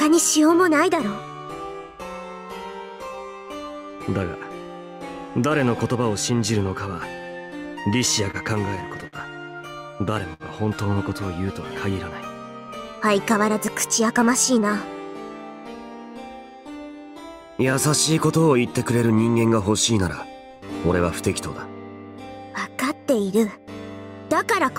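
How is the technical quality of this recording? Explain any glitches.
The recording has three network-delivery glitches, all clustered between 8 and 14 seconds, where the receiver had to cover for late audio.

From 7.93 to 9.16 s there are repeated stalls (stutter): six times the jitter buffer ran dry and the receiver extended the last sound, 113 ms in all, the longest hold 54 ms. Nothing is lost, but the passage drags. A spectrogram shows smeared, frozen harmonic bands repeating across that span.

At 10.33 to 10.43 s a short stall from a late packet holds the sound for 64 ms while the receiver waits, then resumes exactly where it left off. The waveform shows a brief repeated, slightly dipping segment, and the spectrogram a horizontally stretched patch.

From 12.92 to 14.24 s a jitter buffer speed-up trims the backlog, cutting about 70 ms in small pitch-period slices so the audio runs at 106% speed without a pitch change. 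It sounds hurried, and the spectrogram shows compressed timing with unchanged harmonic spacing.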